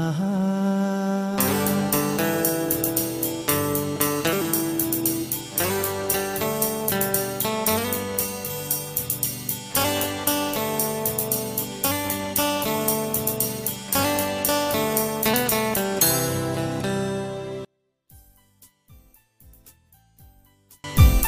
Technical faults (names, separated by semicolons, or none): one channel inverted